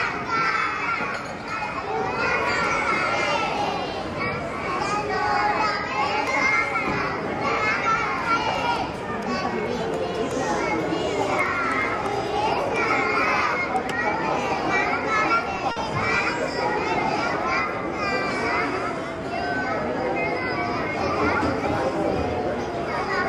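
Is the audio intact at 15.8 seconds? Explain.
Yes, nothing is lost there, but a short stall from a late packet ends right around it, running from about 15.71 to 15.78 s. A packet showed up late and the jitter buffer ran dry, so the receiver held the last bit of sound for about 50 ms until the packet arrived, then picked up where it left off. You hear that moment hang slightly too long, with a faint buzz or dip, and everything after it runs about 50 ms later.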